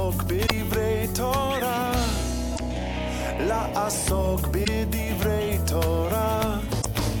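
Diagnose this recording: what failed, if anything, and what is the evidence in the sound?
The codec layer is where this goes wrong: damaged data in a compressed stream. There are four short bursts at 0.43–0.51 s, 2.52–2.60 s, 4.61–4.68 s and 6.78–6.86 s, each about 70 to 80 ms long and spaced roughly 2.1 s apart. Corrupted bytes hit the encoded frames, the decoder misreads or drops them, loses sync and hunts for the next valid frame header. The sound breaks up briefly each time before decoding resumes cleanly.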